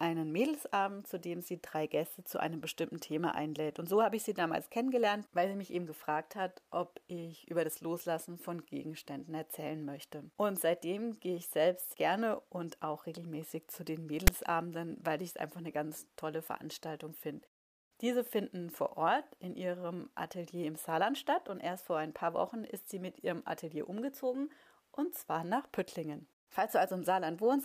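At 14.27 s a very brief burst of harsh static cuts in with hard edges: file tags played as audio. A block of text tags is read as samples, which is why it sounds like a loud rasp offset to one side rather than a symmetric click or evenly spread white noise.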